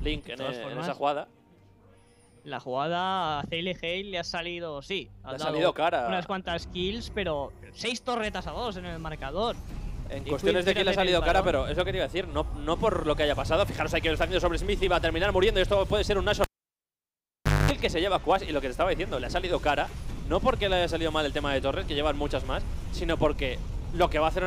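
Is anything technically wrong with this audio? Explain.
Yes. At 16.44 s a cable is pulled and plugged in: a pop, about 1.2 s near-silence, a 0.22 s burst of 50 Hz mains buzz while only the tip touches, then a return pop, unlike a plain dropout.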